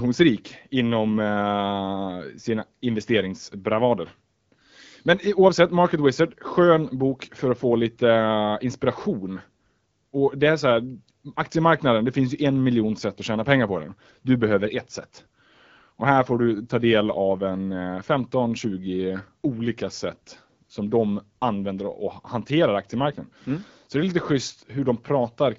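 Nothing goes wrong anywhere in this speech recording, which comes across the way an AMR wideband (HD Voice) call at 12.65 kbit/s normally does, with only the light touch that codec leaves at that rate.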